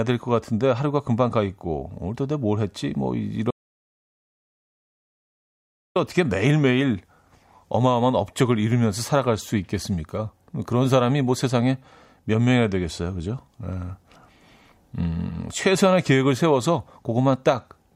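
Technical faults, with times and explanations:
3.51–5.96 s, audio dropout to silence: the speech cuts mid-flow into 2.45 s of silence with no room tone, unlike a natural pause, likely from a lost input.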